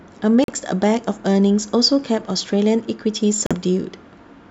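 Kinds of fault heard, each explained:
Bluetooth dropout: two abrupt silent gaps, near 0.44 s and 3.46 s, likely from late wireless packets being discarded; speech resumes further on, skipping the missing audio.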